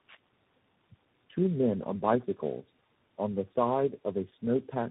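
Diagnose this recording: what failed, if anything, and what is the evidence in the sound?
Tandem speech coding runs through the whole clip, at the codec stage. The speech sounds rough, muffled and warbly throughout, with nothing above about 3.8 kHz, and the texture points to a chain of roughly three speech coders ending in a CVSD stage. At each link border the audio was decoded and coded again, so every coder worked on the previous one's already degraded output, and their errors stacked into more damage than any single codec causes.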